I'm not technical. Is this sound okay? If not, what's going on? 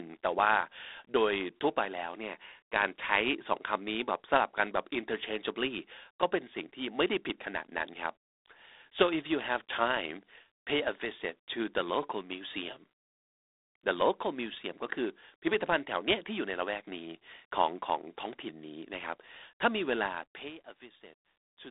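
No. The speech has a harsh, rasping hiss that rises and falls with the talking, plus a muffled phone sound, from start to end. This is G.726 ADPCM, a telephone coding squeezed too tightly.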